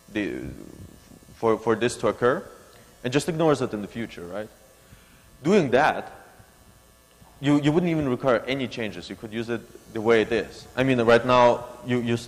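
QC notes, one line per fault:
No faults heard.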